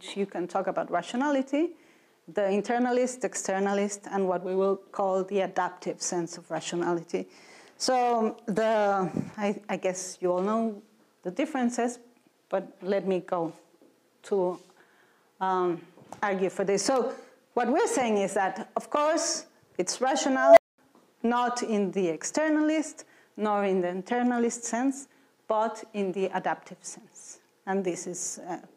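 An unstable filter blows up at 20.33 s: its recursion feeds back without limit, so a tone around 700 Hz swells over about 0.24 s into a loud, clipped squeal, then overflows at 20.78 s and drops into roughly 0.21 s of silence.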